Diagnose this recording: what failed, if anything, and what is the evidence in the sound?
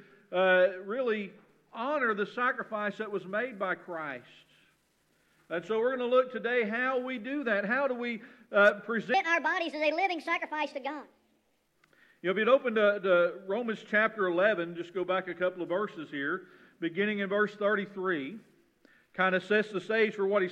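From 9.14 s to 11.68 s there's a section at the wrong speed: the sound suddenly runs hurried and sharp, about 1.43 times too fast, which lifts the pitch by roughly seven semitones, then snaps back. Because tempo and pitch shift together and the change starts and stops abruptly, this likely happened at the editing or playback stage, where that stretch got clocked at the wrong rate rather than being time-stretched properly.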